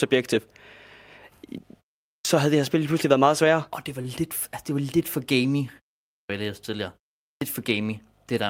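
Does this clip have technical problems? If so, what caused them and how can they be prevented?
Yes. A clipped start after a pause happens at 2.08 s, 6.09 s and 7.21 s, each after about a third of a second of silence. The output device sleeps through the gap and swallows roughly 170 to 200 ms while it wakes, so the speech starts abruptly without its opening. Keeping the output stream open through silences, or turning off the device's power saving, stops this.

At 4.01 s there's a short stall from a late packet. The jitter buffer ran dry, so the receiver held the last bit of sound for 32 ms until the packet showed up, then carried on from the same spot with nothing lost, just a brief held moment with a slight buzz or dip. A somewhat deeper jitter buffer would absorb a delay like that.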